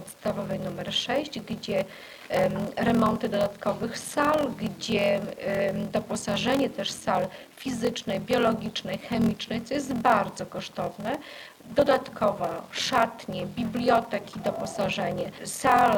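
A block size mismatch (padded) runs through the whole clip. A steady buzz at about 43.1 Hz sits under the sound from start to finish, and everything plays back slower, at 0.861 times normal speed, while the pitch stays close to where it should be. This fits one stage writing blocks of roughly 880 samples into a stage that reads 1024, with the shortfall in each block filled with silence. Those regularly spaced gaps produce the buzz at the block rate and stretch the timing.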